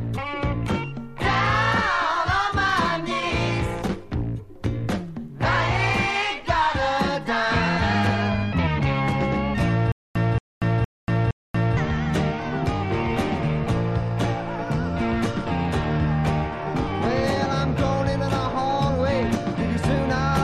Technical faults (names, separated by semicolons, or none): stutter with silent gaps